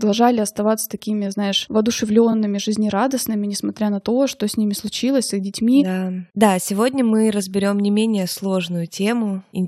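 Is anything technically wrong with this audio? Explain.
Yes, there's one glitch: a case of repeated frames in this speech clip, from 2.31 to 2.33 s, just before "жизнерадостными несмотря на то". A compressed block of about 21.3 ms gets decoded and played a second time, which fits a single codec frame being duplicated in the stream. You hear it as a tiny stutter. The clip runs about 21 ms longer because of it.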